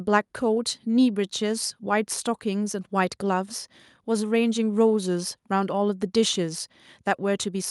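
Speech recording; no technical faults detected.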